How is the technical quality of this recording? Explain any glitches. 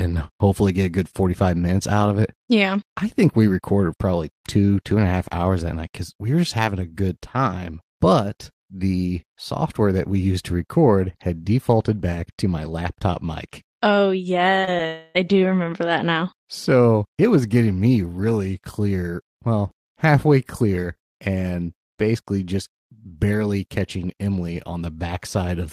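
The speech has a tight cluster of network glitches between about 14.6 and 15.2 s.

Short concealed packet loss occurs at 14.61, 14.65 and 14.77 s. Each time about 20 ms of audio missed the decoder, which extended the preceding sound and blended back, producing a brief smear. A spectrogram shows bands stretched unnaturally smooth for a few hundredths of a second.

From 14.87 to 15.17 s the sound becomes a fading continuation of what preceded it, never dropping to silence. This is likely a long network dropout, with about 0.28 s never played. The waveform shows a smoothly decaying envelope, the spectrogram smeared fading bands, then speech resumes with that stretch missing.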